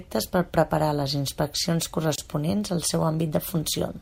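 At 2.16 s the speech drops out for about 26 ms. This is a gap at a join of encoded pieces. Two separately encoded segments were joined untrimmed, leaving encoder delay and end padding as silence. Its edges are smeared by the codec. The speech then resumes where it stopped.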